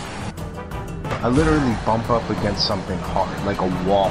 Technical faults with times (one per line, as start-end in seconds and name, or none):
none